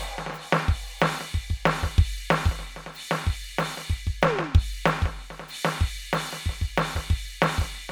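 The music clip has no audible faults.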